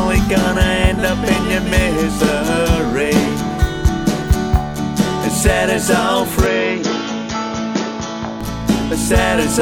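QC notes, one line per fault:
6.46–8.41 s, likely input switched to a poorer device: the sound abruptly turns duller and about 5 dB quieter, with nothing above 6.9 kHz and a faint new noise floor, before full bandwidth returns. The switch is seamless, with no silence.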